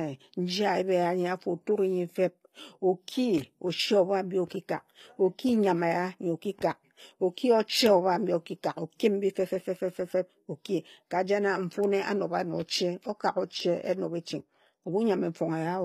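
Throughout, the speech was likely encoded with HE-AAC compression at a low rate, one that fits about 24 kbps, so the treble is rebuilt from copied lower bands rather than coded. Nothing reaches above 14.9 kHz, and s sounds come out plainly gritty and metallic.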